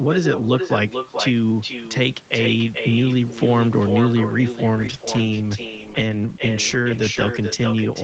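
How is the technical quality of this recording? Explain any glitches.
The recording has two clear problems: a persistent echo and a loss of quality in the second half.

Echo with no canceller runs throughout. The far end's loudspeaker output is picked up by its microphone and returned uncancelled, so every phrase is followed roughly 0.4 s later by a thinner copy about 8 dB quieter.

A call bitrate drop begins at 4.77 s and lasts to the end. The encoder's rate falls from 40 to 12 kbps, bottoming out for about 2.7 s. The Opus coding becomes coarse, so the sound turns rough, watery or muffled, losing clarity compared with the first half.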